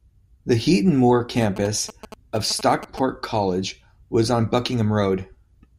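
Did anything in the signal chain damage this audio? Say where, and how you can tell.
Yes, GSM signalling bursts leaked into the analogue wiring from 1.42 to 2.99 s. You hear galloping 217 Hz buzzes, well below the speech, as the circuit rectifies a nearby phone's radio.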